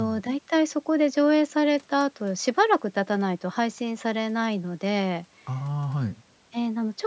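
Nothing technically wrong turns up in this speech clip; it has simply gone through a call's microphone processing, which trims the deepest bass and leaves nothing above 8 kHz, and that's all normal for a call.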